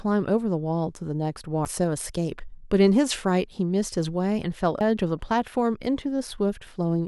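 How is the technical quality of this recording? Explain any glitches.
The recording has two brief glitches, both from damaged data in a compressed stream, at 1.65 s and 4.81 s. Corrupted bytes make the decoder misread a frame and resync.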